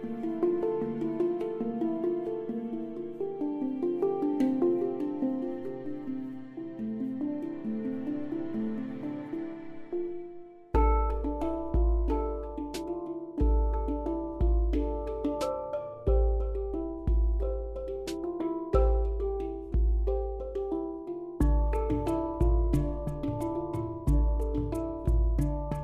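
From 14.37 s until the end of the clip, a faint gritty fizz rides on top of the sound, strongest on the loud and bright passages and unrelated in pitch to anything in the material. This is crude rate conversion. The rate was changed by simple linear interpolation with no proper filtering, and the ratio involved points to a 48 kHz to 44.1 kHz change. The interpolation errors repeat in a pattern that produces inharmonic tones sitting roughly 50 dB below the signal.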